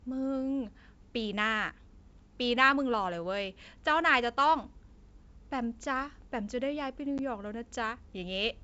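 Packet loss on an ADPCM call hits this speech clip at 7.18 to 7.20 s: about one packet, roughly 10 ms of audio, drops to a hard-edged silent gap. The decoder's adaptive predictor and step size then lose step with the sender's, so the sound resumes with brief distortion as it re-syncs. The underlying G.722 wideband coding at 64 kbit/s leaves the band up to 7 kHz clear.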